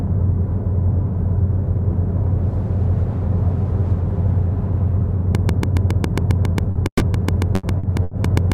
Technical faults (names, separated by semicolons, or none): train of clicks; short concealed packet loss; burst of packet loss